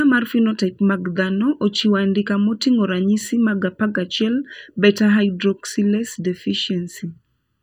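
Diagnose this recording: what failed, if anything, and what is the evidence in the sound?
Channel delay (comb filtering) runs through the whole speech clip: one channel lags the other by a little under a millisecond before the mono sum, at the driver or buffer stage. The sound is hollow and phasey, with fixed notches starting around 700 Hz.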